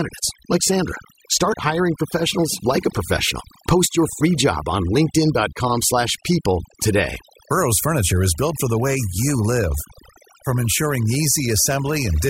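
Speech, with overdone noise removal running for the whole clip. The noise reducer is pulling individual frequency bands down hard wherever they sit near its noise estimate, so the background drops and breaks up into twinkling specks, and quieter speech detail goes too.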